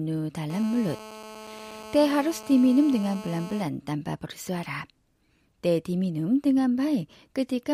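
A speech clip with GSM phone buzz running from 0.50 to 3.63 s, ending just before "tanpa bersuara". A 2G handset nearby was transmitting in bursts at about 217 per second, and the audio circuitry rectified those radio pulses into a hard, raspy buzz at 217 Hz, unrelated to the speech and sitting about 17 dB below it. The buzz is nearly steady, as it is during a call. On a spectrogram it shows as a stack of evenly spaced horizontal lines at 217 Hz and its many harmonics. On the waveform it appears as a regular train of pulses.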